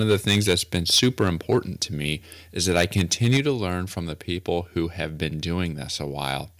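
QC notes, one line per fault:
0.00–1.57 s and 2.69–3.40 s, microphone overload: peaks run about 6 dB, then about 9 dB, over the converter's limit. A small share of samples get their tops sheared off, giving a crackly, harsh edge on either side of "to me is", likely from the input gain being set too hot.
3.37 s, microphone volume stepped down: the voice and background drop about 4 dB in one step right before "to learn from the", likely the call software cutting the input gain during that clipped stretch.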